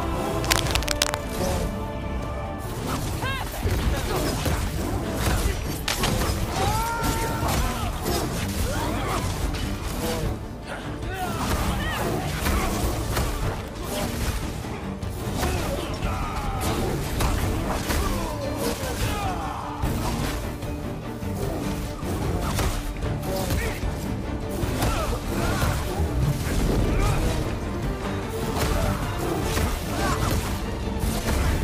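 Cable scratch noise at 0.44–1.14 s and 5.86–6.09 s: crackling about as loud as the sound, likely a worn connector shifting, seen as broadband speckled spectrogram bursts.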